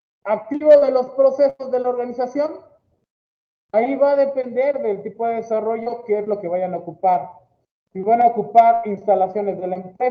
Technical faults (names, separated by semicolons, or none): short concealed packet loss; burst of packet loss